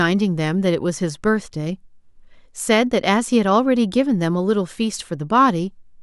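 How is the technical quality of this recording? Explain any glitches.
Nothing stood out on listening to this speech recording, so there are no glitches to explain.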